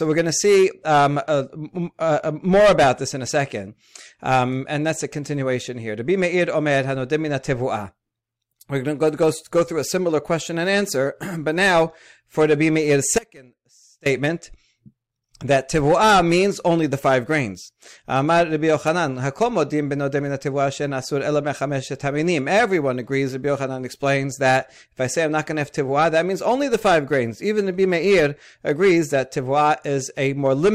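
Speech with an audio dropout to a faint residue from 13.19 to 14.06 s after "for the be meir's". For 0.87 s only a faint leak about 25 dB down remains, cut abruptly rather than faded, likely a momentary signal break.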